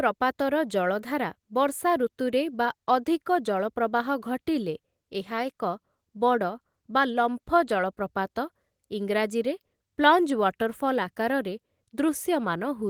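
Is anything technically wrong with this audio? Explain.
No, nothing's actually wrong here; the speech has been through Opus voice compression at around 20 kbps in its hybrid, fullband mode, and what that leaves behind is only light.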